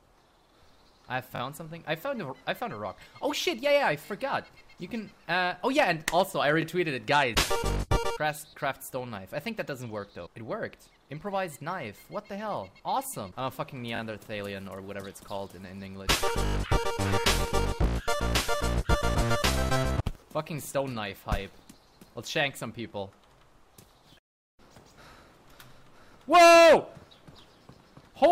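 Repeated buffer stutters at 1.36, 4.06, 6.62, 13.96 and 16.46 s: a short fragment, fitting a 20 ms buffer, replays with hard joins when new audio arrives late.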